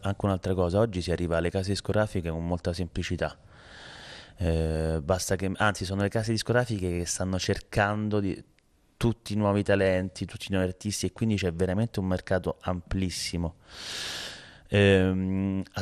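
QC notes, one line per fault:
Throughout: MP2 compression. The speech sounds dull, with a gurgling, granular texture that is plainly audible across the whole clip. The likely cause is MPEG Layer II encoding at a low rate, around 80 kbps. Starved of bits, the encoder drops upper sub-bands and quantises the remaining ones coarsely. On a spectrogram the top end is cut off abruptly, with horizontal bands flickering on and off.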